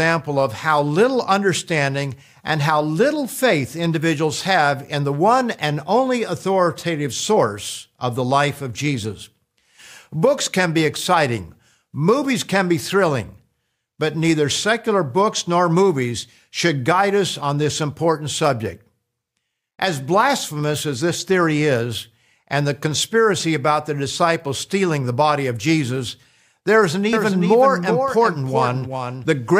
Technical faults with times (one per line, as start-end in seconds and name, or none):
27.13-29.60 doubled audio track